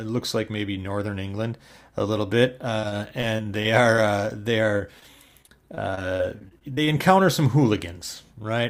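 Repeated packet loss, with its robotic sound, starts at 2.79 s, just after "a little bit", and runs to 3.99 s, before "uh they". Audio keeps dropping out in seven short holes. Together they total 160 ms, and the longest is 37 ms. Each hole is patched by stretching the last sound forward. About 12 percent of the stretch is filler, so it turns choppy.

Short concealed packet loss follows at 4.77 to 4.81 s, after "uh they", and again at 4.99 to 5.03 s. About 20 ms is missing each time. The receiver fills each hole by continuing the sound before it, then blends back. Each one is heard as a brief smear or wobble.

Repeated packet loss returns from 5.42 to 6.89 s, ending before "encounter some". This time there are eleven holes, totalling 200 ms, the longest 24 ms. About 14 percent of the span is filled in, so the sound again becomes robotic and broken.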